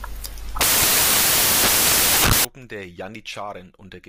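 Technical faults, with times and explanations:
0.0 to 2.45 s, samples built from the wrong bytes: the reader assembled each sample from misaligned or misordered bytes, so the rapidly changing low-order bits landed in the high-order positions. The speech comes with loud, harsh broadband noise, close to white on the louder sounds.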